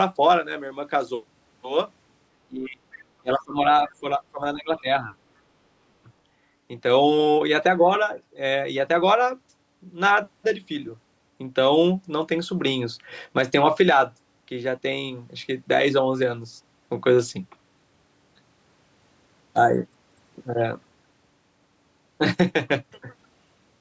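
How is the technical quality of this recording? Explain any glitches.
The recording has two kinds of call-processing glitches, clustered between 2.4 and 5.1 seconds. The call microphone processing leaves nothing above 8 kHz.

Speech suppressed in double talk occurs at 2.44–2.81, 3.21–3.58 and 3.84–5.11 s. The speech dips by up to about 25 dB, then about 15 dB in the last stretch. The echo canceller was likely unable to separate the talker from the loudspeaker echo, so it turned both down.

The other side's voice leaks through at 2.92–2.97 s. It is a brief scrap, about 25 dB below the speech. It is likely loudspeaker echo that the canceller did not fully remove.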